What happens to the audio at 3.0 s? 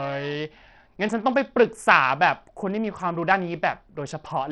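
At 3.0 s the speech carries the same damage heard across the whole clip. The sound is thin and gritty, with treble that flickers and drops away. A rough noise and aliasing ride on the voice. The likely cause is Bluetooth SBC compression. SBC splits the signal into a few wide sub-bands and shares out a small pool of bits without a hearing model. The weak top bands get few or no bits, and the rest are quantised coarsely. The heavy damage fits a low bitrate of about 64 kbps.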